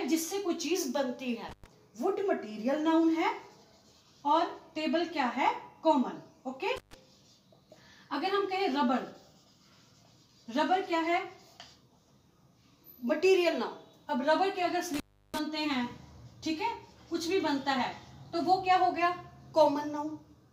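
The audio drops out three times from an intermittent contact, at 1.49–1.66 s, 6.76–6.94 s and 14.94–15.39 s, with the line open for about 110, 150 and 340 ms. Crackle at each break and faint hiss during the gap distinguish a loose connection from clean digital dropouts.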